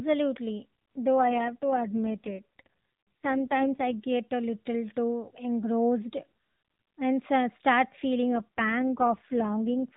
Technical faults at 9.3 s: AMR rate drop

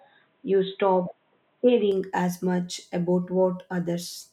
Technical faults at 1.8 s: input switched to a poorer device

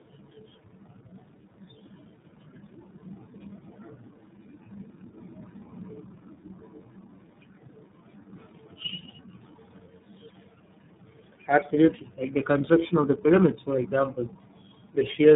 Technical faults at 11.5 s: tandem speech coding

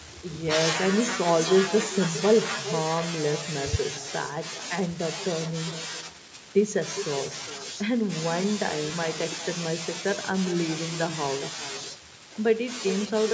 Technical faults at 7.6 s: echo with no canceller

